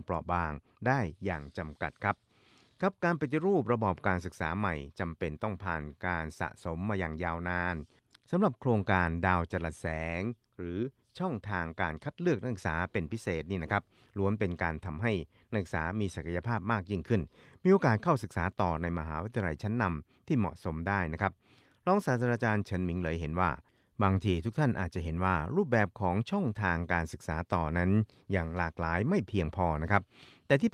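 Nothing stood out on listening to the speech in this recording.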